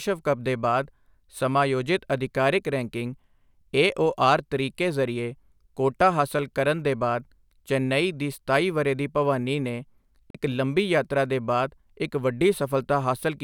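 At 10.30 s the speech cuts out for about 41 ms and comes back at 10.35 s with the gap simply skipped over, not paused. That's a Bluetooth dropout, likely a couple of packets missing the headphones' deadline, leaving a short silence.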